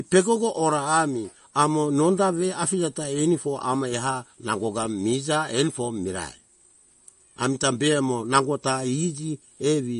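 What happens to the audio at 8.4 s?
At 8.4 s you're hearing what runs through the whole clip: likely MP3 compression. Nothing gets through above 10.6 kHz, and with bits this scarce the weak frequency lines flicker on and off between frames. The speech comes out watery and swirly, which fits a bitrate around 40 kbps.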